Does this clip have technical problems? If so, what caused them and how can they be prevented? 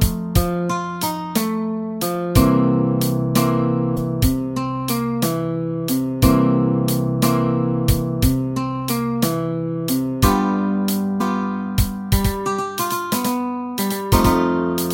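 Yes. There's damaged data in a compressed stream at 3.93–3.98 s and 11.17–11.21 s: corrupted frames make the decoder lose sync, giving short glitches. Checksummed transfers and storage would catch this.

From 12.18 s to the end there's a doubled audio track, a copy about 5 dB quieter trailing by roughly 150 ms, likely from a second, slower capture path. Muting duplicate monitoring or loopback routes would prevent it.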